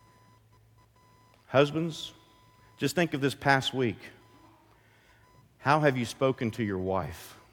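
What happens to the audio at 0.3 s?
A faint whine-like buzz sits under the speech at 0.3 s, pulsing at around 1 kHz and roughly 40 dB below the voice. It runs through the whole clip. This is computer activity noise: processor or graphics load shifting the shared ground of the audio circuit.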